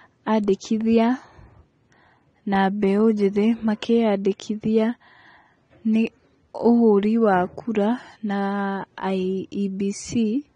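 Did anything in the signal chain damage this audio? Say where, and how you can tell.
Yes, at the codec stage: the speech runs throughout through what is likely AAC compression at a low rate, consistent with AAC-LC at around 32 kbps. Nothing survives above 9.7 kHz, so the top octave is simply gone and the sound is dull. With so few bits per frame, the encoder quantises the spectral lines coarsely, leaving gaps that smear transients and put a warbling, fizzy edge on sibilants and sustained vowels. The damage is plainly audible.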